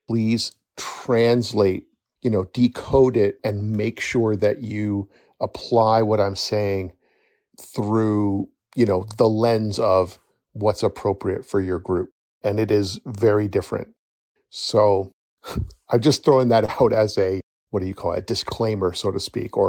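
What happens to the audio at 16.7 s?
Right after "I'm just throwing", from 16.65 to 16.70 s, the speech briefly smears or wobbles: short concealed packet loss, where about 20 ms never arrived and the receiver extended the preceding sound to bridge it. Within that span, 16.68 to 16.70 s sounds rougher and noisier: a lost packet rebuilt from error correction, its 20 ms replayed from a low-bitrate copy carried in the next packet.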